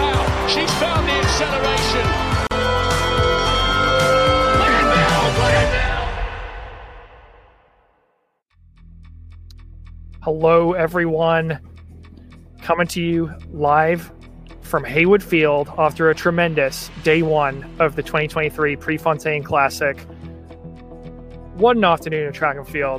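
A gap at a join of encoded pieces falls at 2.47 to 2.51 s: a 41 ms silence where separately encoded segments were butted together with their padding left in.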